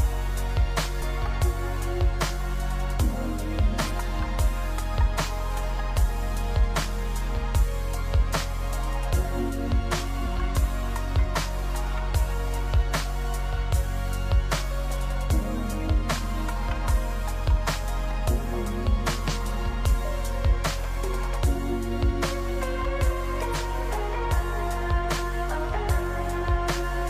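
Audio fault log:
0.98, 3.86, 10.22, 17.79 and 23.50 s, compressed frames skipped: the audio jumps ahead by roughly 150 to 300 ms. Whole frames are left out, so the sound skips forward at each join. The jumps fit whole frames of about 46 ms.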